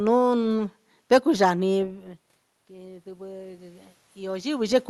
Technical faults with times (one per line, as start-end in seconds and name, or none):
2.68-4.83 automatic gain rising